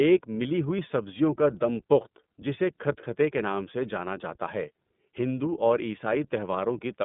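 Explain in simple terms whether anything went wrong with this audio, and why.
The speech sounds thin and boxed-in from start to finish, like a phone call, and it has a plainly audible rough, slightly synthetic edge. The cause is the iLBC codec, a telephone-grade voice codec. It lets through only a narrow band of sound, with nothing above about 3.8 kHz, so the brightness and crispness are lost. It also rebuilds the speech in 30 ms chunks, each coded on its own, which gives the audio its grainy, artificial texture.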